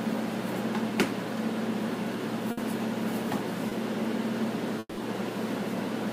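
At 2.51 to 2.59 s there is a burst of packet loss. Several packets went missing together. The receiver stretched the last sound for about 60 ms and faded it, giving a held buzz or hiss. About 60 ms of audio never returns.

From 3.69 to 3.73 s comes a short concealed packet loss. A brief hole was patched by extending the sound before it for about 20 ms, then blending back. It is heard as a quick smear or wobble. Roughly 20 ms is skipped.

Between 4.79 and 4.99 s the sound breaks into a fading buzz or hiss lasting about 180 ms, then about 40 ms of silence. It resumes later, with about 180 ms gone. This is likely a long network dropout, where nothing arrived for a stretch.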